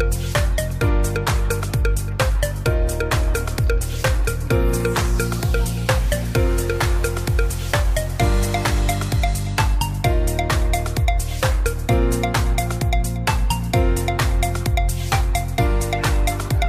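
From 0.91 s to the end, sample clock jitter adds a hiss that swells with loud, bright passages and vanishes in silence. A couple of microseconds of timing wobble leaves error roughly 35 dB down, seen on a spectrogram as haze tracking the signal.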